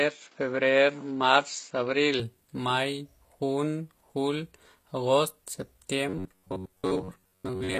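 From 0 to 2.2 s the speech sounds dull and boxy, with a level about 5 dB different and a faint new noise floor. The sound then clears with no gap, likely because the input switched to a poorer device before returning to the better one.

Throughout, s sounds are gritty and metallic, with nothing above 15 kHz and plainly audible codec damage. This points to HE-AAC compression at a low bitrate near 24 kbps, likely rebuilding the treble from copied lower bands.

From 6.09 s to the end at 7.8 s the speech becomes a rigid, metallic 93.8 Hz buzz. This is robotic sound from repeated short buffers, likely a roughly 10.7 ms block replayed in place of most of the real audio.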